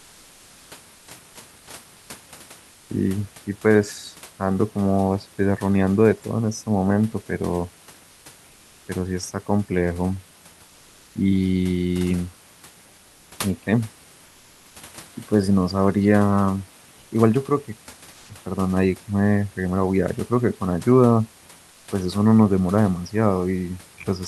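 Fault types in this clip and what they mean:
Comfort noise in place of the background: In seven short pauses, 0.12 to 0.36 s long, the room's real background gives way to steady, featureless noise, up to about 2 dB quieter. This is likely Opus DTX.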